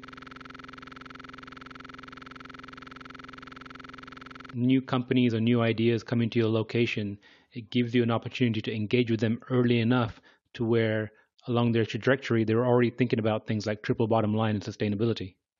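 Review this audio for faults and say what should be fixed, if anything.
From the very start until 4.53 s, a rapid, rattling buzz at about 21.5 Hz, with one 46.44 ms fragment repeating exactly, dozens of times. This is a system hang loop, already in progress when the clip begins: the system froze while the audio hardware kept replaying the same ring buffer, which fits a 2048-sample buffer. Prevent it by muting or stopping the output stream when the audio callback stalls, rather than letting the hardware replay stale buffer contents.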